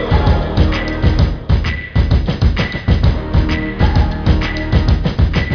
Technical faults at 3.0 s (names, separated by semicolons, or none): none